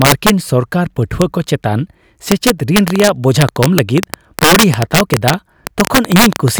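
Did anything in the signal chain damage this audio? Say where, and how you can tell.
Yes. Integer overflow runs through the whole speech clip. A gain stage or sample-format conversion pushed peaks about 7 dB past full scale, and around one percent of samples wrapped to the opposite sign. These are heard as harsh cracks on loud syllables. On the waveform, peaks jump from the top rail straight to the bottom.

A train of clicks runs from 2.88 s to 6.59 s. About thirty clicks come irregularly, at roughly 8.4 per second, standing well above the speech and ticking through the pauses too. A spectrogram shows them as thin broadband vertical lines. The likely cause is interference in the analogue wiring or a faulty connection or power supply.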